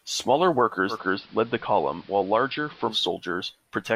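From 0.89 to 2.96 s, digital radio blending to analogue fades to AM over 113 ms: spectrogram thinner in the treble, waveform about 1 dB lower, faint hiss.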